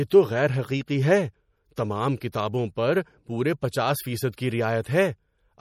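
MP3 compression throughout: the speech sounds plainly watery and smeared, with nothing above 18.7 kHz, pointing to a bitrate near 48 kbps, likely from MP3 encoding.

Pre-echo at 2.20 and 2.32 s, between "غیر حقیقی ہے تمام" and "پر پورے پچاس", and at 4.32 s after "پر پورے پچاس": block-wide quantisation noise spreads 14 to 16 ms ahead of sharp attacks, heard as a brief hiss before a softened onset.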